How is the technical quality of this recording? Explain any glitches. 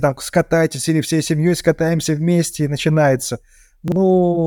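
There is one glitch, chunks out of order, from 3.88 to 3.96 s, just after "скатаемся вместе и начинается". A 40 ms chunk arrived one chunk late and played after its successor. No speech is lost, but the swapped order leaves three hard joins, heard as a brief jumbled stutter.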